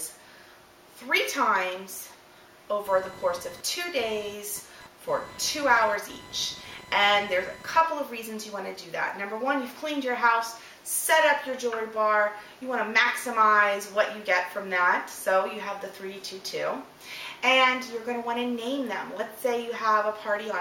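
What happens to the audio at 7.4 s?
At 7.4 s, computer activity noise is present. It runs from about 2.86 s to 7.81 s, so this moment falls near its end. It sounds like a buzzing, chirping pulse train repeating around a thousand times a second, sitting roughly 20 dB below the sound. It tracks the computer's workload, not the audio. Processor, graphics or mouse activity shifts the ground shared with the audio circuit, and that disturbance leaks into the signal.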